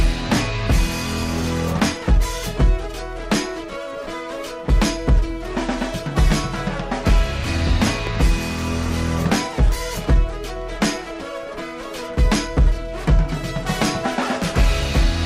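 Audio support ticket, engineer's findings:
Likely a voltage spike from a plug, switch or static discharge, 8.07 to 8.09 s: single loud pop, peaking a few dB above the signal, sound continuing underneath.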